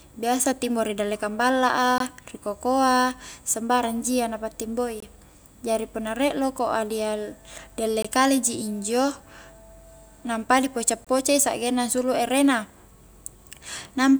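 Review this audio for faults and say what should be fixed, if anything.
Gap between chunks at 1.98–2.00, 5.00–5.02, 8.02–8.05 and 11.05–11.07 s: the speech stops for about 21 ms at each 3-second join, leaving short holes. To prevent it, trim codec padding and schedule each chunk to start exactly where the previous one ends.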